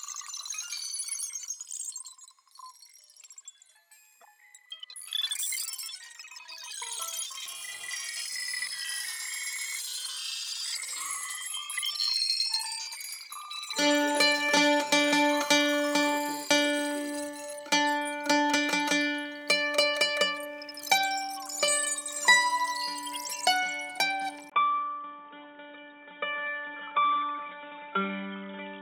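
At 24.50 s the sound cuts out for about 20 ms. After that gap, it no longer reaches above 3.8 kHz. It turns dull and boxy, a few decibels quieter, and a new background noise sits well below the signal. This lasts to the end of the clip. The likely cause is an input switched to a poorer device mid-recording. The system swapped to a narrower-band device with its own tone, level and noise.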